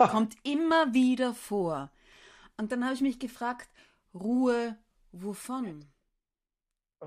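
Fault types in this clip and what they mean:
No faults detected in the speech.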